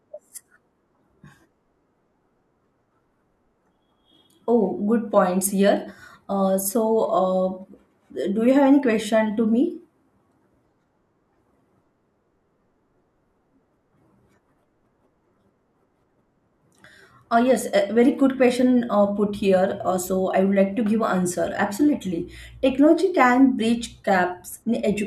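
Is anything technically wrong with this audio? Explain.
No, nothing technically wrong can be heard anywhere in this speech recording.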